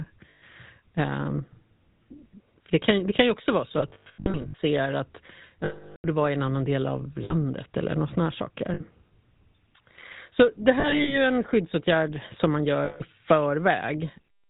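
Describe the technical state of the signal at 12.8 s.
The speech passes through the GSM full-rate codec, which fits a 13 kbps stream. Nothing above 4 kHz survives. Pulse-driven vocal tract modelling leaves a plainly audible buzzy, gravelly roughness. From 12.84 to 13.02 s there are lost GSM frames, a gap of about 160 ms. The decoder repeats the last good frame. That gives a rough, metallic ring.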